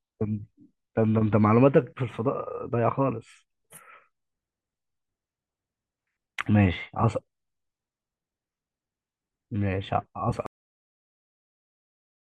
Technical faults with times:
10.46-12.29 cut-off end

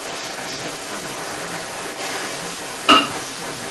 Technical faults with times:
0.00-3.71 echo leak

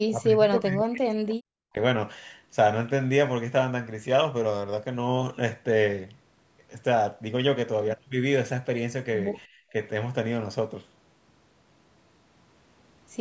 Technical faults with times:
0.07-1.78 speech suppressed in double talk

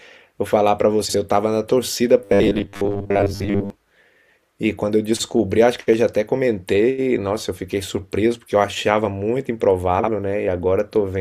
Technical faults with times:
1.05-1.14 frames out of order
2.24-3.70 robotic sound from repeated short buffers
9.99-10.09 frames out of order

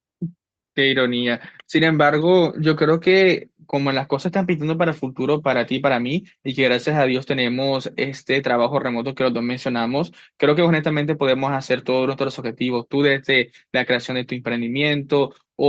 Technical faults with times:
none

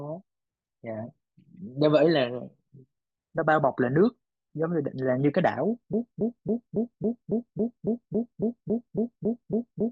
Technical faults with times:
5.93-9.91 broken-record loop

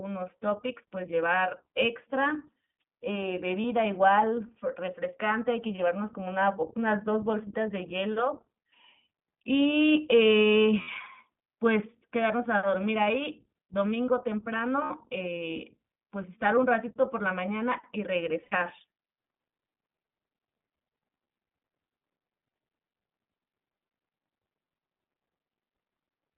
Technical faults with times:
0.00-26.38 iLBC codec
3.62-3.65 lost iLBC frames
10.82-10.89 lost iLBC frames
14.84-14.91 lost iLBC frames
18.44-18.54 lost iLBC frames

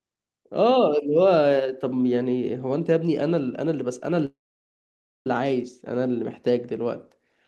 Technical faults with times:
4.25-5.27 call audio freeze

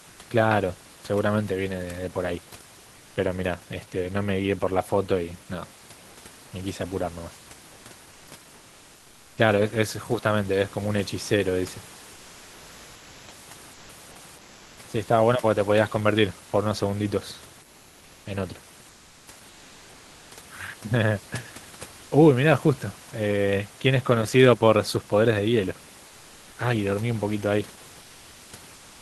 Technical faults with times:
2.97-3.15 comfort noise in place of the background
12.13-13.27 comfort noise in place of the background
13.73-13.89 comfort noise in place of the background
14.37-14.77 comfort noise in place of the background
18.89-19.27 comfort noise in place of the background
28.01-29.01 comfort noise in place of the background

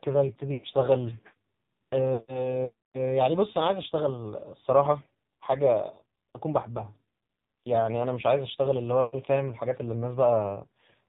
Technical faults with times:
0.00-11.08 AMR narrowband mobile codec
0.54-0.67 lost AMR speech frames
2.14-2.27 lost AMR speech frames

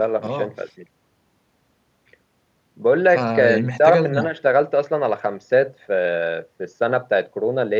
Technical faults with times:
none

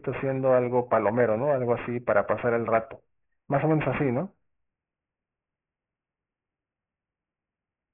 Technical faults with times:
0.00-7.93 aliasing

